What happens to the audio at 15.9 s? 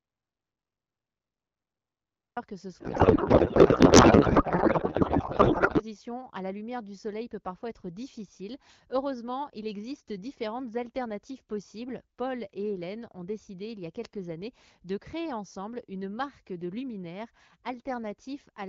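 Nothing goes wrong at 15.9 s: the speech there comes through intact, carried by the AMR wideband (HD Voice) codec at 12.65 kbit/s, which keeps it clear.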